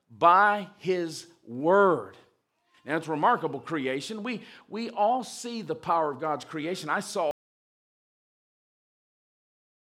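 An audio dropout to silence begins at 7.31 s and runs to the end: the speech cuts off into silence, likely from a lost input while recording continued writing silence.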